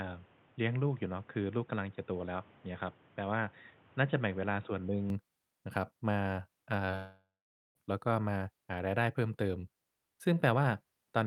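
Input switched to a poorer device, from 0.0 to 5.10 s: the opening audio has nothing above 3.8 kHz, so it sounds dull and boxy. It is roughly 5 dB quieter, with a new noise floor about 30 dB down, and it clears at once with no gap, most likely an input change.

Short concealed packet loss, at 6.85 to 6.89 s: about 20 ms of audio failed to arrive, and the receiver extended the preceding sound to bridge the gap before rejoining the real signal. The result is a brief smear or wobble.

Long network dropout, from 6.95 to 7.77 s: about 0.8 s of audio never arrived, likely from a network interruption. The last sound is stretched into a fading buzz or hiss, then roughly half a second of silence follows before the audio resumes, without the lost portion.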